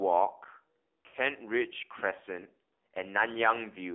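The whole thing's gone through the AMR narrowband mobile codec. The band sits at roughly 250 Hz to 3.5 kHz, and the speech has a plainly buzzy, synthetic edge from the pulse-driven vocal tract model. That thinness fits the low 7.4 kbps mode.

Then from 1.08 to 1.17 s you get lost AMR speech frames. The decoder smears the last good pitch and vocal tract settings with falling gain, so the sound stretches and fades for a moment before picking back up a bit rough. That fits about 60 ms, or three frames, going missing.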